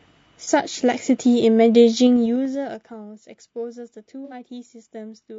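Low-delay AAC compression runs throughout this speech: the voice is rough and grainy with noise between harmonics, likely from AAC-ELD at a low bitrate such as 32 kbps, whose short frames resolve pitch poorly. AAC frame loss with concealment occurs at 0.44 to 0.48 s and again at 4.25 to 4.33 s. The decoder patches missing audio from the last good spectrum, leaving brief smeared, noisy patches about 30 ms and 60 ms long, which fits one and two lost frames. Zipper noise runs from 2.02 to 3.02 s as the level falls roughly 20 dB in unsmoothed 2 dB steps, about ten per second, each adding a small audible tick.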